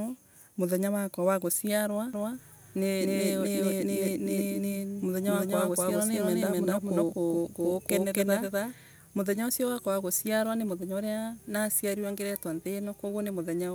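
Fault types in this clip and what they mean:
Doubled audio track: from 2.13 s to 8.73 s, just after "muthenya wakwa wa guciarwa", a second full-band copy of the speech runs about 300 ms behind the original at roughly the same level, giving a hard, slap-like repeat with no reverberant tail or room colouring. The copy switches in and out abruptly at those points. The likely cause is the signal being captured twice, once through a slower path, or an edit that left two misaligned copies.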